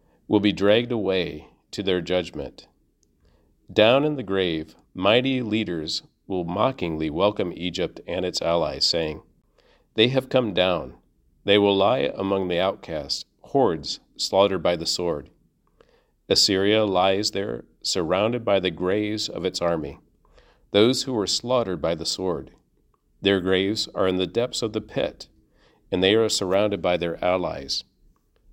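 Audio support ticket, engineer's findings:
Brief hole in the speech at 9.42 s, right after "and its allies saying". About 20 ms of silence, then speech resumes as if it had played on. Likely a Bluetooth dropout: a late packet discarded on the wireless link to the headphones, output muted until the next good one. The gap fits a single lost packet.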